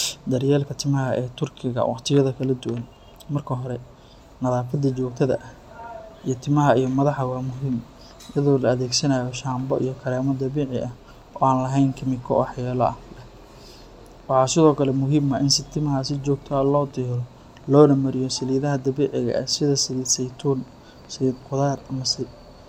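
Speech recording, no technical faults detected at any point in the clip.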